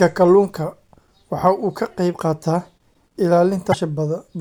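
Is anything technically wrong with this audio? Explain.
Yes, there is damaged data in the compressed stream of this speech clip, from about 3.70 to 3.74 s. For roughly 46 ms the decoder reads corrupted frame data, produces nonsense for that stretch, then resynchronises on the next clean frame header, giving a short garbled chirp, squawk, click or brief hole.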